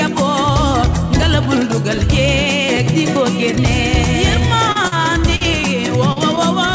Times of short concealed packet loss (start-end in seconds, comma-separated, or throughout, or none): 4.87-4.95, 6.12-6.19